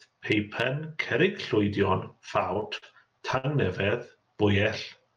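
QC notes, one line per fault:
2.19–2.84 s, repeated stalls (stutter): five brief holds, 85 ms total, longest 46 ms. Late packets kept draining the jitter buffer, so the sound drags.
3.38–3.46 s, short stall from a late packet: one packet showed up 61 ms late, so the last sound got stretched 61 ms, then picked up cleanly.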